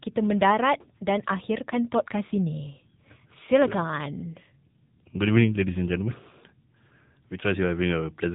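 AMR narrowband mobile codec damage runs through the whole of this speech clip, from start to finish. The sound has been squeezed through an 8 kHz phone-style coder that rebuilds the voice from a vocal-tract model and a sparse pulse excitation, so nothing survives above about 3.8 kHz and the speech takes on a plainly audible buzzy, synthetic edge. That degree of coding damage fits one of the middle AMR-NB modes, around 7.95 kbps.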